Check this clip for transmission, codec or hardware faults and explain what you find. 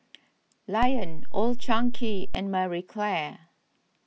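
One hardware-type fault is present: a DC step. At 0.83 s the waveform's zero line jumps by about −18 dBFS, as when a converter recalibrates or an offset input is switched in. It holds until 2.35 s, then returns. Each edge gives a low thump while the speech continues unchanged.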